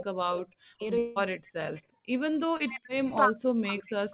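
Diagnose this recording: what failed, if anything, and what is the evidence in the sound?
Echo leak, a call-processing fault at the far end. A delayed copy of the speech trails the talker by about 0.35 s in brief scraps: at 0.00–0.04 s, 1.47–1.52 s, 1.74–1.83 s and 3.10–3.15 s. The first scrap is fairly strong, roughly 10 dB under the speech. The later ones sit far lower, around 30 to 35 dB down. The likely cause is a loudspeaker whose acoustic echo canceller left residue in the microphone signal and sent it back.

Speech suppressed in double talk, again in call processing. From 0.00 to 0.83 s, and from 2.44 s to the end at 4.1 s, the talker's level dips and breaks up. The deepest drops reach about 40 dB. Both spans coincide with the other side talking. This is likely the echo canceller's suppressor, unable to tell near speech from loudspeaker echo, pulling everything down together.

Long network dropout, in the network stage. 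At 0.98–1.19 s about 0.18 s of audio is missing. No gap of silence is heard. Instead the last sound is stretched as a fading buzz and hiss for nearly the whole hole. The speech then resumes further on, with that stretch gone. The likely cause is a burst of lost packets, covered by the receiver's concealment until real audio arrived.

Background gated by the echo canceller, in call processing. From 1.83 to 2.12 s the room sound drops away abruptly, by about 37 dB at its deepest, then returns. The dip follows directly on the echo scrap ending at 1.83 s. The canceller heard loudspeaker output, clamped the microphone hard to keep echo out, and released about 0.3 s later.

Short concealed packet loss, in the network stage. At 2.57–2.63 s there is a brief smear in the sound. About 30 ms never reached the decoder in time. The receiver extrapolated the preceding sound to fill the hole, then cross-faded back into real audio. 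The patch sits within the G.711 path's normal 4 kHz band limit.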